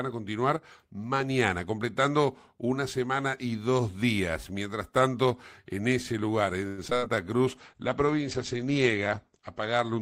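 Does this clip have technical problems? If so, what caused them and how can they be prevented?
Yes. From 0.57 to 0.62 s there is a brief dip of about 6 dB in the speech level. That sounds like one channel drops out for about 50 ms before the stereo pair is summed to mono, which leaves only half of the shared signal. The likely cause is a momentary loss on one input path. Checking the cabling and monitoring both channels before downmixing would prevent it.

Between 6.67 and 7.04 s the speech turns choppy. This is repeated packet loss, producing the robotic sound. Four holes open in quick succession, the longest about 100 ms. The receiver patches each one by extending the last sound, so roughly half of that stretch is concealment rather than real audio, and about 120 ms is missing outright. A more stable network path, forward error correction or packet redundancy would reduce it.

Overlapping the end of that, from 6.94 to 7.38 s, a jitter buffer slow-down stretches the speech. 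The receiver repeated small pitch periods to rebuild its reserve, adding about 37 ms, so playback runs at 94% speed with unchanged pitch and sounds slightly drawn out. Reducing network jitter, or allowing a steadier buffer target, would avoid these catch-up stretches.

From 7.47 s to the end a call bitrate drop takes hold. The encoder falls from 32 to 11 kbps and stays at the lowest rate for nearly 2 s. Audio bandwidth shrinks from 20 kHz to 8 kHz, so the speech becomes muffled and coarser, with a rough, watery edge. More reliable uplink bandwidth, or a bitrate floor that keeps the codec above this range, would prevent it.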